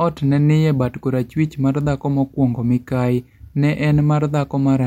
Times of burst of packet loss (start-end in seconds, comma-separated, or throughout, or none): none